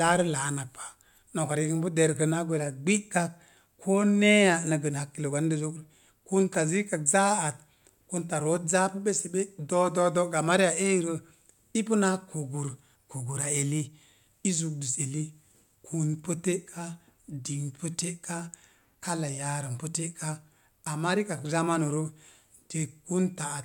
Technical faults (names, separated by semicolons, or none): none